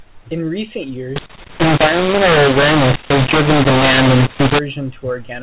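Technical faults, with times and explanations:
1.16 to 4.59 s, mu-law and A-law mixed up: the speech was coded with A-law but decoded as mu-law, so sample levels get scrambled, some too loud, some too soft, and quiet stretches lift into noise. It turns harsh and gritty.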